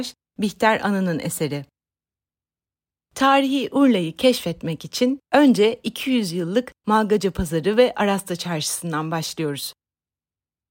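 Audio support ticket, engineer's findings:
Findings: no audio faults identified in the speech recording.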